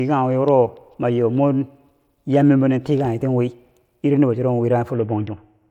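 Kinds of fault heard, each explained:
Bluetooth SBC bit pool drop: from 4.94 s to the end, the speech loses its treble and turns gritty, which fits the encoder's bit pool falling from 31 to about 6.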